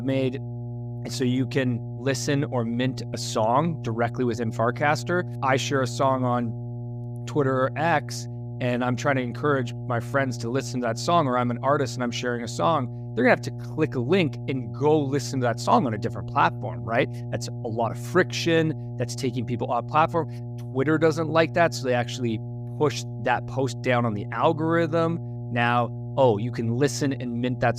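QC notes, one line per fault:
Throughout: mains hum, a steady 60 Hz tone with low harmonics under the speech, only around 10 dB down, from power-line coupling through a ground loop or nearby transformer.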